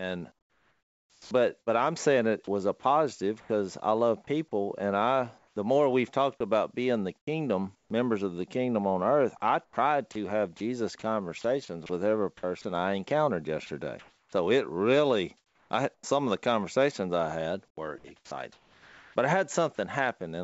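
Speech that turns choppy in four stretches, with syllable edges dropping out: 0.32 to 3.49 s (about 1.2 s replaced in total), 7.18 to 7.90 s (0.24 s), 9.37 to 16.03 s (1.2 s), and 17.68 to 19.78 s (0.96 s), the last starting after "the conversations I had". This is likely sound chopped by the voice detector, which toggled transmission on and off so that comfort noise filled the gaps. Between "love people and I" and "more we've talked about", from 5.38 to 5.56 s, the background becomes a steady, featureless noise about 10 dB quieter. This is likely comfort noise in place of the background, generated by the receiver while the sender was silent. At the end of that gap, from 5.53 to 5.56 s, the next word begins abruptly, missing its first 30 ms. This is likely an onset clipped by the voice detector, which was slow to resume sending. Throughout, nothing is heard above 8 kHz, which fits the 64 kbps G.722 call codec.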